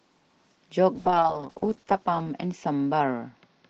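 From 0.97 s through to the end, there's a call bitrate drop: the encoder gets squeezed from what sounds like about 32 kbps down to around 8 kbps, bottoming out for roughly a second. Speech turns coarse and watery, with the top end muffled.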